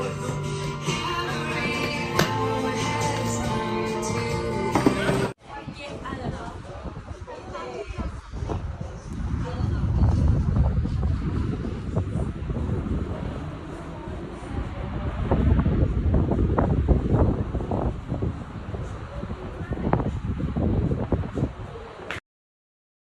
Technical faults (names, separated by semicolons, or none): cut-off end